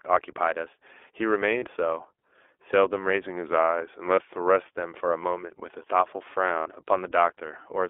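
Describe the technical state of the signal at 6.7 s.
Lost iLBC frames cover 6.60 to 6.69 s. The decoder fills about 60 ms by repeating the last pitch cycle with added noise, so you hear a held, buzzy vowel. A spectrogram shows flat, repeated harmonics, and the waveform shows near-repeating periods. The voice recovers right after. Throughout, iLBC codec coding limits the band to 300 Hz to 3.5 kHz, with a rough, synthetic texture and nothing above 3.5 kHz on the spectrogram.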